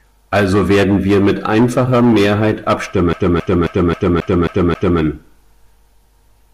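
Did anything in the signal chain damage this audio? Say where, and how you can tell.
Yes, the damage is at playback: the CD is stuck on one turn. From 3.13 s to 5.01 s the same slice of speech, about 268 ms long, comes round again and again, seven repeats in all, each separated by a tiny mute where the laser jumps. That's a scratch knocking the pickup back a track at the same spot on every rotation, which gives the dead-even, machine-gun stutter you only get from a skipping disc.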